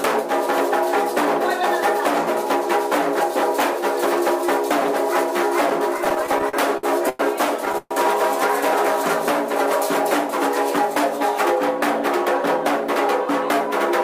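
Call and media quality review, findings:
Repeated stalls (stutter), 5.98 to 7.21 s. Twelve short holds, longest 102 ms, about 290 ms of sound stretched in. Jitter buffer running dry repeatedly. Receiver extends the last sound each time. Nothing lost. Audio drags for roughly a quarter of the span.

Call audio freeze, 7.78 to 7.93 s. Sound holds as a fading buzz for 131 ms, ending in 30 ms of silence, then resumes where it stopped. Likely a packet delay jump of 131 ms emptying the jitter buffer. Gap inserted, nothing missing.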